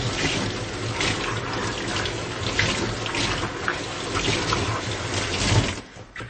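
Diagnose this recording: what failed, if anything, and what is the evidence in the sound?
Codec stage: throughout, audible watery swirl and nothing above 8.3 kHz, likely MP3 compression at a rate fitting 32 kbps, zeroing weak frequency lines.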